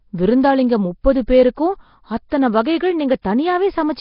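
Speech runs with a rough, hissy halo and a smeared, underwater character throughout, with nothing above 5.3 kHz. It is likely Nellymoser compression at a rate fitting about 22 kbps: the damage is heavy, and unlike ordinary low-pass muffling, weak bands are filled with noise rather than simply dulled. At 2.29 to 2.32 s a sharp attack is preceded by about 26 ms of hiss. This is pre-echo, where quantisation noise sized for the loud onset spreads back through its coding block. Unlike a true echo, it arrives before the sound, not after it.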